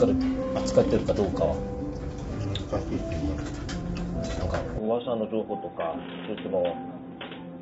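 From the start, the audio has a rough, grainy texture, with noise filling the gaps between tonal components and nothing above 7.8 kHz. This is most likely low-delay AAC compression of the AAC-ELD kind, at a rate consistent with about 24 kbps. Its short frames resolve fine frequency detail poorly, and the damage is plainly audible. Unlike a clean band limit, the graininess sits inside the passband.

At 4.78 s the sound abruptly turns duller and boxier, and it stays that way to the end. Content above 3.8 kHz disappears, the level drops by about 5 dB, and a new background noise appears about 35 dB below the signal. There is no silence at the change. This points to the input having likely switched to a poorer device. A filter or EQ change would narrow the band, but it would not bring its own noise floor and level shift at the same instant.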